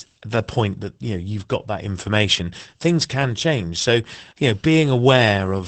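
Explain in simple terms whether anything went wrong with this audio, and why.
Opus voice compression affects the whole recording, from the first moment to the last, and the damage is plainly audible. To save space, the speech was squeezed by a voice codec that chops it into 20 ms slices and rebuilds each from a rough model of the throat and mouth. With so little data, the fine detail and breathiness are approximated, so the voice sounds muffled, slightly hoarse and a little robotic.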